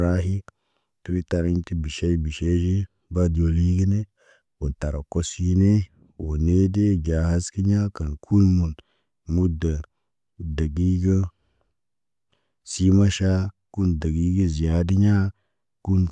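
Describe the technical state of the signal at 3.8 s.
Nothing is wrong with the signal at 3.8 s; the speech passes through intact at that point, with no dropout, distortion or other fault to be heard.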